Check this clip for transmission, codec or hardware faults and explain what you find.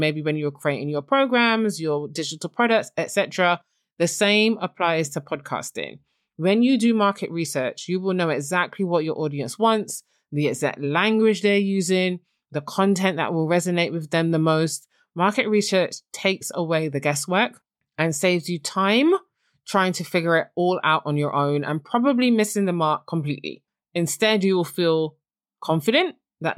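Nothing here gives me any reason for concern, so there's honestly nothing to flag on this speech recording.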